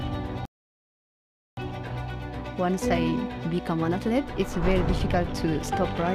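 A rebuffering stall interrupts the audio at 0.45 s: playback drops to silence for about 1.12 s, then resumes at 1.57 s exactly where it stopped. The player ran out of downloaded data and waited for more, so nothing is skipped, but the clip runs longer.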